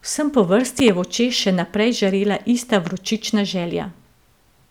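At 0.79 to 0.91 s, just before "je v očeh še", a loud pop arrives as two sharp thumps, and at 2.87 to 2.90 s, after "žarela ista", a single one, each roughly ten decibels above the speech, likely from an electrical pulse such as a plug or switch transient. Unlike a dropout, the speech continues beneath them.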